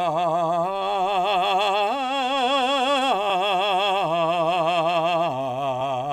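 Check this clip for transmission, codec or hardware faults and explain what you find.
The music has compressed frames skipped twice, at 3.29 s and 5.80 s. Each time it lurches forward with a short smeared blip rather than a click, losing roughly 150 ms and then 200 ms. Several 26.1 ms compressed frames went missing or were rejected by the decoder, and overlapping neighbours blurred each join.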